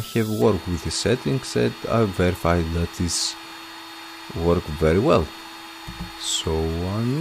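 No technical faults can be heard anywhere in the audio. There is no dropout, glitch or other event to place in time or trace to a cause.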